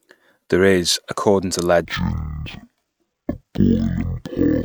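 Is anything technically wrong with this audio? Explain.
Yes. From 1.85 s, just after "is according to", to the end at 4.65 s, there is a stereo read as mono fault. Interleaved left and right samples are read in sequence as one channel. The speech slows to half speed and drops a full octave. A fainter mirrored copy appears in the upper half of the spectrum.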